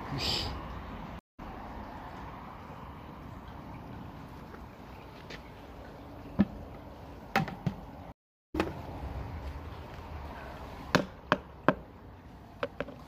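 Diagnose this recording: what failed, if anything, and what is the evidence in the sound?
The network connection to the stream dropped twice, and each time the player reconnected and started a new decoder partway through, a stream reconnect. At 1.19 s the sound cuts to silence for 164 ms and picks up at 1.40 s from a point roughly 150 ms further on. At 8.12 s a longer 392 ms gap ends at 8.56 s with about half a second of material skipped, so the listener hears a gap followed by a jump forward.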